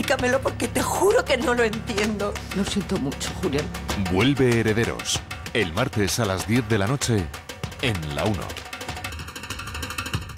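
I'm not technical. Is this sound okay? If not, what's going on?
No. From about 9.10 s to the end at 10.37 s there's a channel delay (comb filtering): one side arrives under a millisecond late, and combining the two cancels parts of the sound, so it turns hollow and thin.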